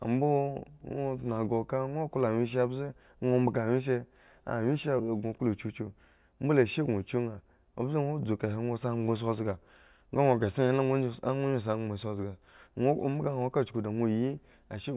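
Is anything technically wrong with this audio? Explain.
No, no technical faults present.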